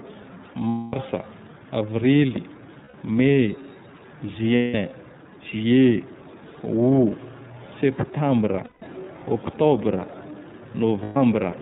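Speech here, and the whole thing has the iLBC codec sound: the band stops at 4 kHz, and there's a plainly rough, slightly synthetic edge from each frame's excitation being coded on its own, which fits the 13.33 kbps mode with 30 ms frames. Then there are lost iLBC frames at 0.69 s (240 ms), 2.84 s (90 ms), 4.56 s (180 ms), 8.64 s (180 ms) and 11.03 s (120 ms). The decoder fills each gap by repeating the last pitch cycle mixed with noise, so you hear a held, buzzy vowel that fades on the longer ones, then clean recovery right after.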